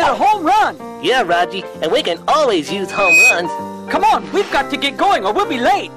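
A piercing 2.5 kHz tone swells over roughly a third of a second from 2.89 s to 3.37 s, peaking around 10 dB above the audio: loudspeaker feedback squeal, where the microphone's pickup of its own loudspeaker runs away at that frequency.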